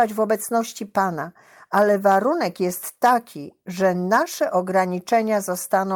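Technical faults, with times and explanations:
No technical faults are heard in this speech clip.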